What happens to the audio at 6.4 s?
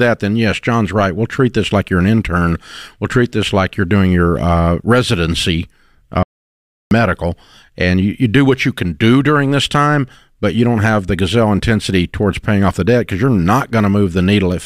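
An audio dropout to silence runs from 6.23 s to 6.91 s, right after "doing your uh residency". The input feeding the recording was most likely interrupted, perhaps by a momentary disconnect or an accidental mute, while the recorder kept writing silence. The speech cuts off abruptly into about 0.68 s of total silence, with no room tone at all, then resumes mid-flow. Whatever was said during that gap is lost.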